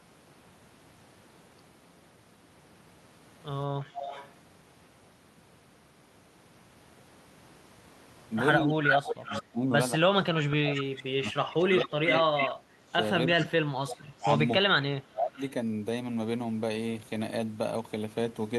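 A far-end echo canceller likely let its loudspeaker pickup through, causing echo leak: from 3.93 to 4.31 s a copy of the speech trails about 277 ms behind, about 15 dB down. Echo leak returns at 8.9 to 9.42 s (302 ms delay, about as loud as the speech), 10.49 to 12.49 s (313 ms, about 5 dB down), 13.39 to 14.19 s (324 ms, about 15 dB down) and 15.35 to 15.51 s (332 ms, about 25 dB down). The delay creeps later each time. Over the same stretch, from 8.61 to 13.53 s, the canceller likely mistook overlapping talk for echo, producing speech suppressed in double talk: the speech dips by up to about 25 dB in pieces totalling roughly four seconds. It happens again from 14.16 to 15.41 s, with under a second of cut-outs.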